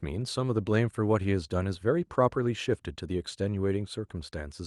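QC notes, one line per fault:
Nothing stood out on listening to this speech, which comes through an Opus call path with its band topping out around 12 kHz.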